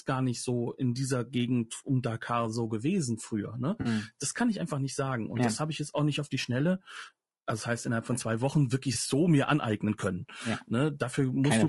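Throughout the speech, the voice is rough and grainy, with noise filling the gaps between harmonics and a thin, synthetic-sounding top band. This is likely low-delay AAC compression; its short frames resolve pitch poorly, which fits AAC-ELD at around 32 kbps. A spectrogram shows smeared harmonics and patchy high frequencies.

At 3.81 s, about 40 ms goes missing, which fits two lost frames, and AAC frame loss with concealment fills the gap from the previous spectrum, leaving a brief smeared, noisy patch. At 8.93 s, a shorter 20 ms loss sounds the same. On a spectrogram each shows as a blurred vertical smudge without clear harmonics.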